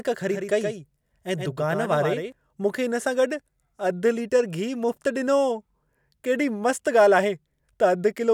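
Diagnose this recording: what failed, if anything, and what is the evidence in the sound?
The likely failure is in the driver or buffer stage: a slower second capture path mixed the same speech back in a second time. From 0.30 s to 2.32 s a doubled audio track is audible, with a full-band copy trailing the original by roughly a tenth of a second at about 5 dB lower. The copy has no decay or room colour, so it sounds like a hard slapback rather than reverb, and it starts and stops abruptly at those two times.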